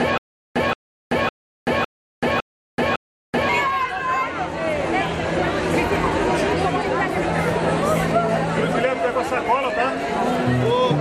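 Stutter with silent gaps, from the very start to 3.49 s: one 176 ms burst recurs every 556 ms between silences, likely a stalled stream replaying its last fragment.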